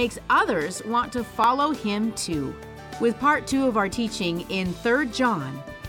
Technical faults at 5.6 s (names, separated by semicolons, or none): none